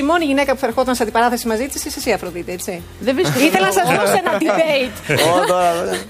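From 0.39 s to 2.00 s a mains hum sits under the sound: a steady 60 Hz tone with some low harmonics, around 25 dB below the signal. Power-line current is leaking into the audio path, as a ground loop or nearby transformer would cause.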